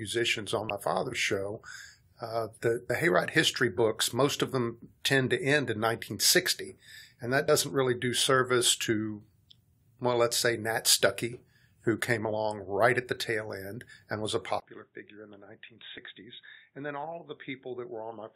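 Speech, marred by two kinds of fault. Damaged data in a compressed stream produces four brief chirps or blips, at 0.69 s (just before "father's show uh the"), 2.89 s, 7.48 s (between "and that" and "really do service to") and 15.97 s. At each one the decoder misreads a corrupted frame, loses sync and skips ahead to the next header. On a waveform each shows as a tiny discontinuity, and on a spectrogram as a thin broadband vertical smear lasting about 12 ms. From 14.60 s, right after "end and was a", the sound turns dull and boxy, most likely because the input switched to a poorer device. A 20 ms gap of silence marks the switch, the level drops by roughly 10 dB, and a new noise floor sits around 50 dB below the signal. On a spectrogram everything above 3.8 kHz is cut away sharply until the end, and the waveform's envelope visibly shrinks at the join.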